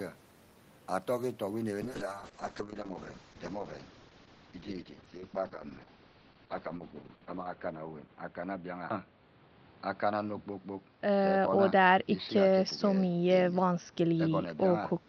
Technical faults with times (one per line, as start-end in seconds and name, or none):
1.83-15.08 call bitrate drop